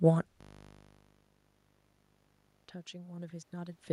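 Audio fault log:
0.41–2.64 s, system hang loop: the system froze while the hardware kept replaying one 20 ms buffer, turning the speech into a steady 50 Hz buzz.
2.96–3.88 s, automatic gain rising: the input dropped by about 18 dB, and the gain control slowly added about 3 dB, swelling speech and room noise together.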